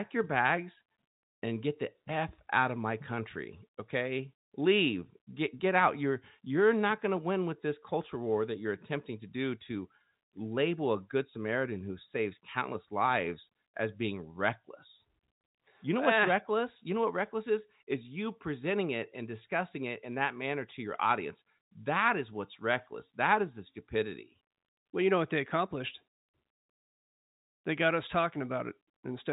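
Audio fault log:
Nothing stood out on listening to this speech, which comes through the narrow band of G.711 telephone coding with nothing above about 3.8 kHz.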